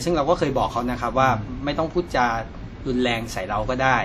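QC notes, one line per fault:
Throughout: WMA compression, likely at about 48 kbps, gives ringing, washy speech with breathing hiss; the spectrogram shows smeared blocks, missing weak components, and nothing above 19.7 kHz.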